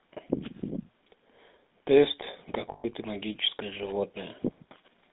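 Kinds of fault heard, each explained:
GSM full-rate codec: The whole clip passes through the original GSM speech coder. It models the vocal tract and excites it with regularly spaced pulses, keeping only part of the excitation. The speech has a buzzy, gravelly roughness that is plainly audible throughout. The band runs only from about 200 Hz to 3.7 kHz, so the sound is thin and boxy. The overall quality fits a 13 kbps full-rate link.
lost GSM frames: From 2.72 to 2.85 s, about 120 ms of the signal is missing. The decoder fills the gap by repeating the settings of the last good frame. This is heard as a short, rough, metallic ring in place of the speech. The gap fits about six lost 20 ms frames. Normal decoding returns once good frames arrive again.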